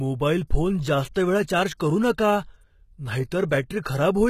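From start to finish the speech carries plainly audible coding damage, likely from HE-AAC compression at a very low rate, one that fits roughly 20 kbps. The upper band is rebuilt from copied lower bands, so s sounds come out gritty and metallic, with treble that is not true to the voice. On a spectrogram the top looks blocky and repetitive, its harmonics misaligned above the crossover, and everything stops sharply at 14.9 kHz.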